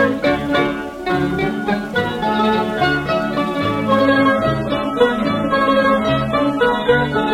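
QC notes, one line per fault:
4.06–7.33 s: adaptive stream at a lower bitrate. Quality drops abruptly with no gap, as the player switches to a leaner AAC rendition, which fits a fall from 96 to 32 kbit/s. The spectrogram shows a flat ceiling at 13.5 kHz, while the waveform stays unbroken.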